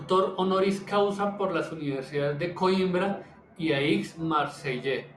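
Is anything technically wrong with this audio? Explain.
No, there's nothing technically wrong here that I can hear, so this short bit of speech comes through without any faults to point out.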